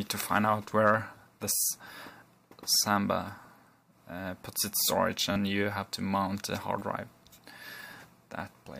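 Audio arrived late three times, so the device replayed its last buffer, which fits a 10 ms size. These repeated buffers at 1.56 to 1.60 s, 5.32 to 5.36 s and 6.79 to 6.81 s each sound like a brief buzzing stutter.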